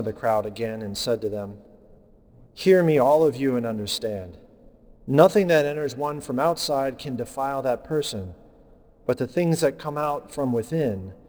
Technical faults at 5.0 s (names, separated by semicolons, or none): sample clock jitter